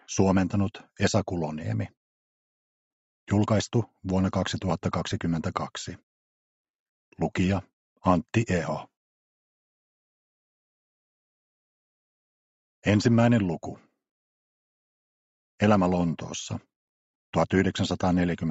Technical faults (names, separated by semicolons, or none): none